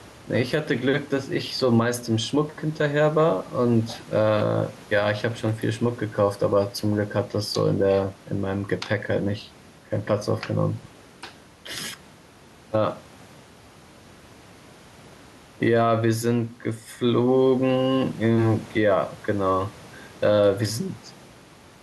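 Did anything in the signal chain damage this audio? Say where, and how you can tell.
Yes. Gain pumping runs through the whole clip. The gain swings by around 5 dB, and the room noise sits about 30 dB below the speech. That points to call processing, most likely input gain set far too high with a fast limiter or compressor clamping each peak. This is different from a noise gate, which cuts the background off abruptly. Here the speech itself sounds squashed flat.

Chunks out of order occur at 10.78 to 10.86 s, at the driver, buffer or network stage. A 20 ms block of speech plays about three chunks late, after audio that should have followed it. The result is a brief jumbled stutter with three hard joins where the misplaced pieces meet. Unlike a dropout or packet loss, there is no gap and no concealment smear. All the audio is present, just in the wrong sequence, which fits a late write or a reordering in the jitter buffer.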